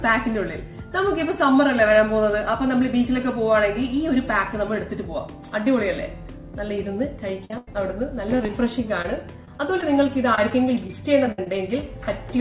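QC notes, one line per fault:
7.45–7.75 s, repeated packet loss (robotic sound): four holes within about 0.3 s, the longest 92 ms, and more than half the stretch is patched by extending the last received sound. The result is choppy against audio that stops at 4 kHz.
8.37–11.83 s, repeated packet loss (robotic sound): fifteen short dropouts scattered across this span, none longer than 61 ms, with about 8% of it filled by repeating prior sound. The effect is intermittent roughness and small stutters, and the 4 kHz ceiling fits a G.711 call path.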